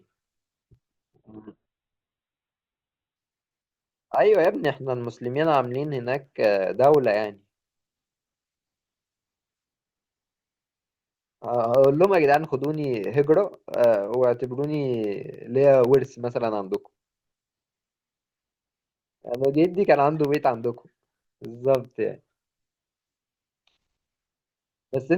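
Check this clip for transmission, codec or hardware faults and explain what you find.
Two faults are present: a steady train of periodic USB or driver dropouts running through nearly the whole recording, and a two-second stretch where an adaptive stream fell to a lower bitrate.

From 0.15 s to 25.0 s, something blocks the USB bus or audio driver every 0.1 s, and a tiny slice of samples, roughly a tenth of a millisecond, is lost and replaced by silence. Each gap breaks the waveform abruptly, producing a tick. At ten per second, around 300 in total, these form a regular, rapid ticking riding on the speech, audible only where there is signal.

Between 1.16 s and 3.16 s, a slowed connection made the adaptive stream switch to a much leaner encoding. The sound is consistent with Opus dropping from about 64 kbit/s to about 8 kbit/s. Nothing above 4.2 kHz survives, so sibilants and consonant detail dull abruptly, and the speech takes on a muffled coding texture. 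Full quality returns just as suddenly at 3.16 s, with no gap at either switch.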